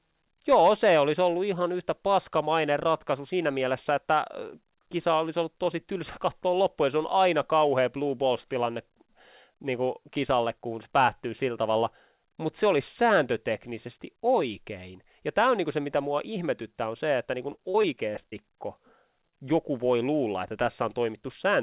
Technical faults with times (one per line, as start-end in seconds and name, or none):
17.52-18.45 repeated packet loss (robotic sound)
19.29-19.34 short concealed packet loss